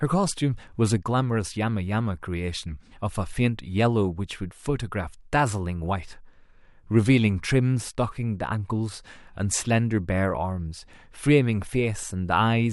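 No technical faults can be heard anywhere in this recording of speech. There is nothing here that calls for a timestamp or a description of a problem.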